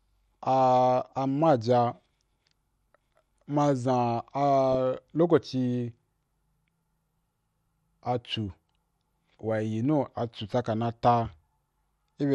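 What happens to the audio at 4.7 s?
At 4.72 to 4.75 s there is a short burst of DAB burbling: brief blips of noise in single sub-bands. Bit errors have slipped past the error correction into the MP2 data, so wrong samples reach the decoder. The error rate sounds low, well under one percent, and the burst is short enough to point to only a few corrupted frames.

Underneath, the whole clip carries clearly audible MP2 compression, and at this moment too the sound is dull and granular. Upper sub-bands are switched off and those that remain are coarsely quantised, with a gurgling texture. The likely cause is Layer II encoding at a low rate, which fits roughly 80 kbps.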